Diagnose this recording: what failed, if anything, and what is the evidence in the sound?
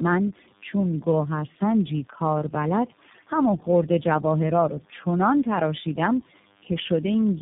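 Tandem speech coding at the codec stage, across the whole clip. The speech sounds rough, muffled and warbly, with nothing above about 3.8 kHz. That points to roughly three low-rate speech coders in a row. Each one re-encodes the previous coder's degraded output, so the damage compounds.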